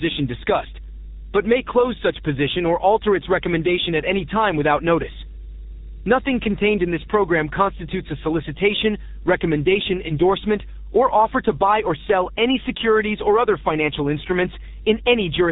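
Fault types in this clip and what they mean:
Mains hum: a steady low 50 Hz tone with some low harmonics sits under the speech for the whole clip, at roughly 15 dB below the speech, the sign of a ground loop or nearby transformer leaking the power line into the signal.
G.723.1 codec: the speech sounds muffled and hoarse throughout, with smeared consonants and nothing above 3.8 kHz, heavy damage from this early low-rate telephony codec running at 6.3 kbit/s, whose 30 ms frames update the voice model too slowly.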